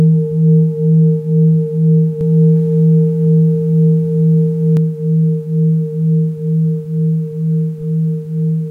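Doubled audio track from 2.21 to 4.77 s: a copy at equal level trails about 150 ms behind, likely from a slower second capture path.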